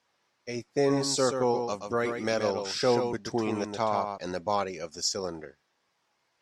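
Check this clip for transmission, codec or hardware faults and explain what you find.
A doubled audio track runs from 0.88 to 4.18 s, likely from the speech being captured a second time through a slower path. A full-band copy trails roughly 150 ms behind, a few decibels quieter, with no room decay, and it cuts in and out abruptly.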